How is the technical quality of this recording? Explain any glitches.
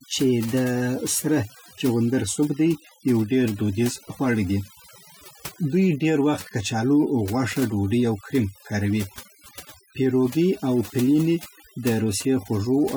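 The recording is held back by one processing fault that runs through the whole clip. Throughout, overdone noise removal strips frequency bands near the estimated noise floor along with quieter speech detail, leaving near-silent gaps with twinkling specks. A spectrogram shows patchy, isolated time-frequency islands scattered across an emptied background.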